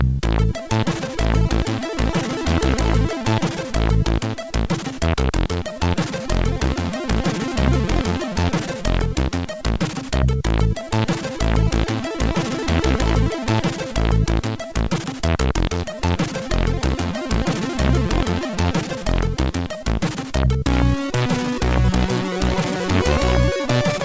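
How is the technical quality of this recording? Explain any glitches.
The technical quality is good, with no glitches to explain, and the audio carries the band-limited top end of a call link, with nothing above 8 kHz.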